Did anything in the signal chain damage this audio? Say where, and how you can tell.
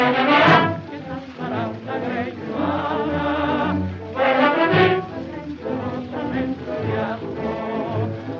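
No, nothing in the signal chain damaged this audio; the only processing heard is a call's microphone path, whose removal of the lowest bass and top end near 8 kHz is normal for that stage.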